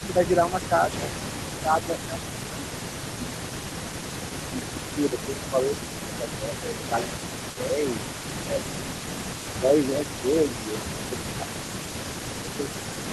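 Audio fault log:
throughout: echo leak. The far end's echo canceller likely failed to remove all of its loudspeaker pickup, so a faint copy returns 334 ms late, about 15 dB below the speech.
0.00–0.16 s, 1.61–3.40 s, 4.38–6.82 s, 8.34–8.74 s, 9.59–10.38 s, 10.74–12.61 s: speech suppressed in double talk. While both sides talk, the echo canceller likely mistakes the talker for echo and turns everything down. The voice dips by about 5 dB in the first stretch and by about 10 dB after that.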